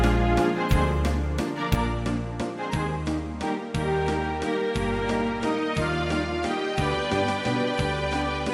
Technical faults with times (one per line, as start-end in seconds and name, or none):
1.75-8.54 input switched to a poorer device